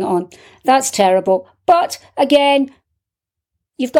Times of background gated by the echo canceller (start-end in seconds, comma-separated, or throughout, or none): none